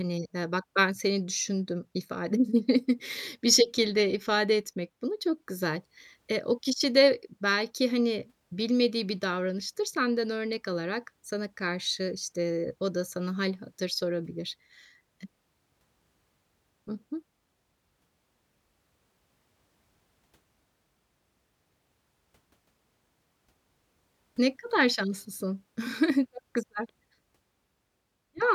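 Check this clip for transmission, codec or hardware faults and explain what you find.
No faults turn up on checking this clip.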